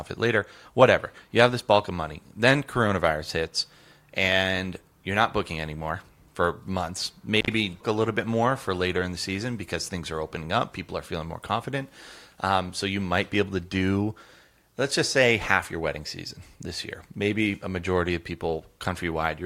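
Intermittent contact, 7.37 to 7.52 s: a loose plug or cable connection in the speech path separates briefly and then remakes. The line stays open for about 71 ms, so the signal drops out abruptly. Crackle marks both edges of the gap as the contact scrapes open and closed, and faint residual hiss fills the interruption until the connection settles and the speech returns.

Stream segment skipped, 7.80 to 7.83 s: shortly after the dropout, the speech jumps forward without a pause, leaving a small blip at the join where two unrelated stretches of audio meet. The likely cause is a segmented stream in which one chunk failed to arrive or decode and the player moved straight on to the next, so the programme resumes further along than where it broke off.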